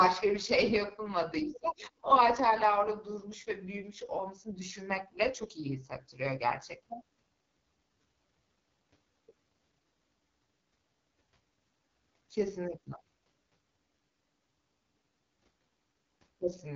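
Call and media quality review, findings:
AMR wideband (HD Voice) codec artefacts, whole clip, 0 to 16.8 s. Speech rough, raspy. Heavy damage. Spectrum empty above 7.5 kHz. Top band hissy, noise-like. Probable component: AMR-WB encoder at its lowest mode, roughly 6.6 kbit/s. Mechanism: too few bits for the pulse-driven vocal tract model below 6.4 kHz, so its excitation goes coarse. Band above 6.4 kHz is synthesized from shaped noise.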